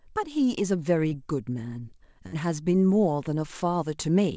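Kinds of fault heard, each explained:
Short concealed packet loss: At about 1.10 s, roughly 20 ms of the call arrived too late for the decoder. The receiver bridged it by extending the preceding speech for about 13 ms and blending back, leaving a quick smear or wobble in the voice.
Burst of packet loss: Around 2.27 to 2.35 s, a longer run of about 60 ms went missing. The receiver stretched the last speech sound for about 53 ms while fading it, so you hear a brief held buzz or fading hiss before speech resumes further along.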